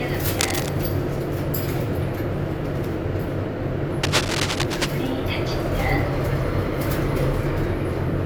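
A recording of sounds, marred twice by bursts of scratchy, rustling noise: from 0.39 to 0.69 s, sitting a little below the sound, and from 4.03 to 4.89 s, roughly as loud as it. This cable scratch noise likely comes from a worn cable or connector being moved, its contact resistance jumping erratically.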